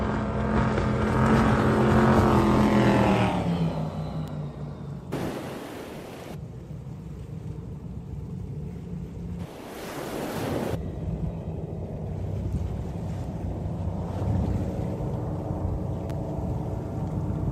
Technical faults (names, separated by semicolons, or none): electrical switching spike